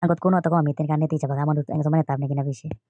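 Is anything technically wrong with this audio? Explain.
Yes. Throughout the speech there is a wrong sample rate: playback runs 1.38 times fast, raising pitch about 5.5 semitones, which fits 16 kHz audio played at 22 kHz. Voices sound high and hurried; spectrogram harmonics sit higher and events compress in time.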